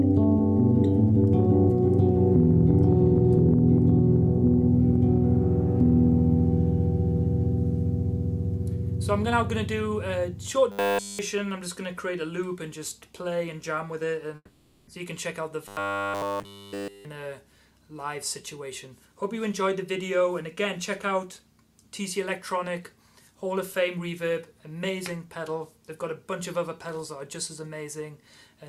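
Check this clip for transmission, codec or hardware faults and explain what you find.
Three transmission faults are audible: two stretches of robotic sound and one long network dropout.

From 10.72 to 11.19 s and again from 15.68 to 17.05 s there is robotic sound from repeated short buffers. A rigid, metallic 100 Hz buzz replaces essentially all of the real audio. This is likely a late-arriving stream being covered by looping the last 10 ms buffer.

From 14.35 to 14.89 s there is a long network dropout. About 520 ms of audio is missing. It is bridged by a fading concealment buzz or hiss that ends in roughly 30 ms of silence before the sound resumes without the lost section. The likely cause is packet loss on the network.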